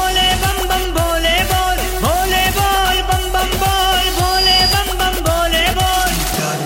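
A microphone picked up the loudspeaker it was feeding, and around 4.9 kHz the loop gain passed one, producing loudspeaker feedback squeal from 4.15 to 4.88 s. A single high tone swells over roughly a third of a second, ending about 5 dB above the sound.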